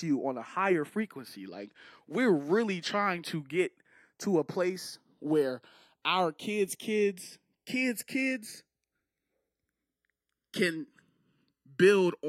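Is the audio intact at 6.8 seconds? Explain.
No. At 6.8 seconds the speech carries channels drifting apart, a fault that runs through the whole clip. The left and right channels come from separately clocked devices that disagree by something like 70 parts per million, so the delay between them creeps steadily, reaching under a millisecond by the end. Folded to mono, the comb-filter notches from that delay glide slowly across the spectrum, heard as a gradual flanging sweep.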